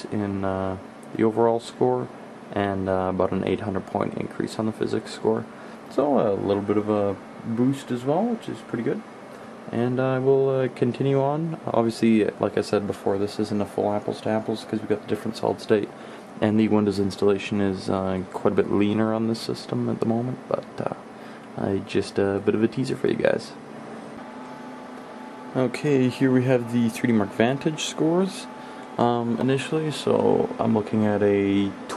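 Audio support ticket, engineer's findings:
Nothing to flag here: I listened across the whole clip and found no audible faults, so no component or mechanism needs chasing on this ticket.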